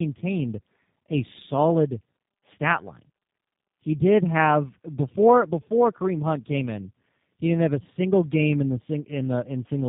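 Tandem speech coding runs through the whole clip. The speech was decoded and re-encoded at each link, which fits two passes through an 8 kbit/s G.729A-type coder. Each pass roughens the last. Nothing sits above 3.7 kHz. The speech sounds muffled, rough and warbly.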